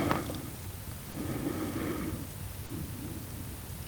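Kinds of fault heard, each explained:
Short concealed packet loss: brief gaps of 20 ms and 30 ms, near 1.12 s and 2.66 s, where missing speech was synthesised from preceding sound, heard as short smears.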